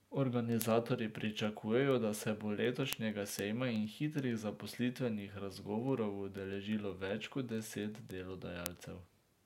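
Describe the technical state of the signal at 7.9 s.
At 7.9 s you're right in the middle of the word clock ticks that run from 0.15 to 9.40 s. The receiving clock drifts against the sender's by a few hundred ppm, so a sample slips about every tenth of a second, giving sharp, uneven clicks.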